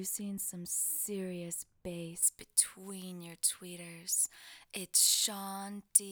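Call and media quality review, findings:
Pre-emphasis left on, 2.23 s to end. Sound turns thin, bright, hissy on sibilant-type content. Treble up about 11 dB at 10 kHz relative to 1 kHz, matching a J.17 boost curve. Probable component: transmission or decode stage where the de-emphasis cut never got applied, so the boost rides straight through.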